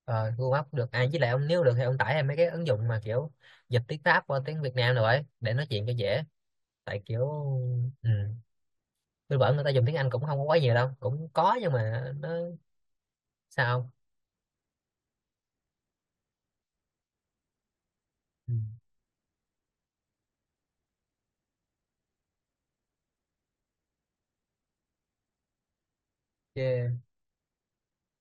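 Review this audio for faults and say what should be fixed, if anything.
Nothing needs to be fixed, as reviewing this audio turned up no faults.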